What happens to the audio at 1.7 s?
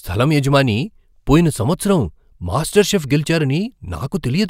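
Nothing goes wrong at 1.7 s; the speech there plays through intact, with no dropout, click, distortion or other fault.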